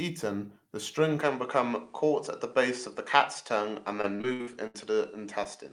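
At 1.21 s, just after "the string", the input likely switched to a poorer device, and it stays that way to the end. From there the sound carries nothing above 10.5 kHz and turns duller, with a new background noise roughly 35 dB under the speech. The level barely changes and there is no silence at the switch.

From 4.01 to 4.76 s, repeated packet loss (robotic sound) sets in. About six dropouts arrive in quick succession, the longest 70 ms. Each is patched by extending the preceding sound, so roughly a third of the stretch is synthetic fill, heard as choppy speech with pieces missing.

From 5.44 to 5.47 s, a short concealed packet loss leaves about 20 ms missing. The receiver bridges it by continuing the last sound before blending back, which comes across as a brief smear or wobble in the speech.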